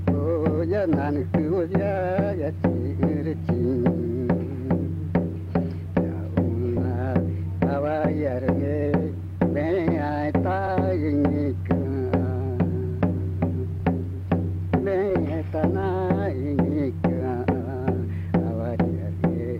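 At 1.37 s and again at 6.76 s the audio lurches forward, first by about one frame and then by about two. These are compressed frames skipped: whole 23.2 ms frames were missing or rejected as damaged.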